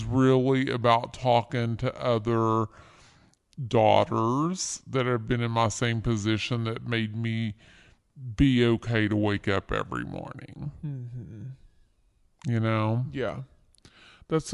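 From the start to the end, the speech runs at a wrong sample rate: material recorded at 44.1 kHz is played at 32 kHz. That makes everything about 0.73 times as fast and roughly 5.5 semitones lower, so voices come out slow and low.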